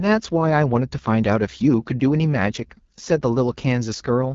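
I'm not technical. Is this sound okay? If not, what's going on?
No. From start to finish the speech sounds rough and raspy, and the airy top end of the voice is cut off, so nothing above about 7.3 kHz comes through. This is the AMR wideband (HD Voice) codec, the phone system's way of squeezing speech into a small data stream. It rebuilds the voice from a simplified model of the throat and mouth, and here it is running at one of its lowest settings, which makes that roughness plainly audible.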